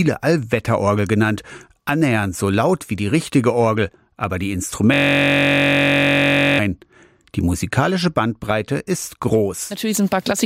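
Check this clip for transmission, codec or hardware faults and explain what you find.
A steady, rasping buzz at about 47 Hz replaces the audio from 4.94 s to 6.59 s. This is a system hang loop. The computer or its audio driver stalled, and the sound hardware kept replaying the last filled slice of its ring buffer. That slice is 21.33 ms long, which fits a 1024-sample buffer, and it repeats about 78 times. A loop that short fuses into a pitched drone instead of a stutter.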